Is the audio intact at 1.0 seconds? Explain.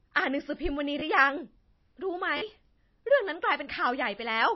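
No. From 1.00 to 1.02 s a repeated buffer makes a brief buzzy stutter. A short chunk, which fits a 512-sample buffer, plays again twice with hard joins, unlike a dropout's silent gap. The sound there also carries a watery, swirly texture with nothing above 5.7 kHz, likely from low-bitrate MP3 compression rather than a simple low-pass filter, which would leave no swirl.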